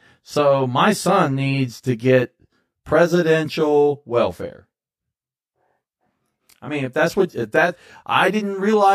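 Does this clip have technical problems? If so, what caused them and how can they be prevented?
Yes. Channel delay (comb filtering): one channel lags by roughly 20 ms before mono summing throughout, carving evenly spaced notches from about 20 Hz upward, so the speech sounds rough or slightly doubled. Align channel timing, or check mono compatibility, before summing to mono.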